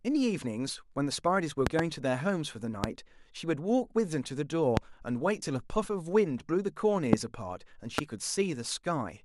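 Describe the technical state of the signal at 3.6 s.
At 3.6 s the speech signal is intact, with no audible technical fault at that moment.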